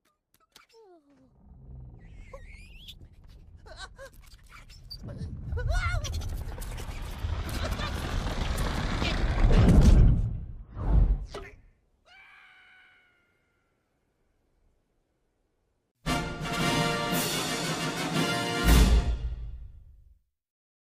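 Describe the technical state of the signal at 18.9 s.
At 18.9 s the signal is intact, with no dropout, distortion, glitch or other fault present at that moment.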